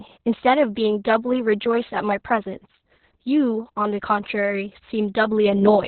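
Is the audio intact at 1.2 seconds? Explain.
No. At 1.2 seconds, as throughout the speech, Opus voice compression is audible. Nothing above 4.4 kHz survives, and the SILK coder's coarse excitation makes the voice hoarse and slightly robotic, which points to a very low bitrate near 6 kbps. A plain low-pass filter would muffle without that graininess.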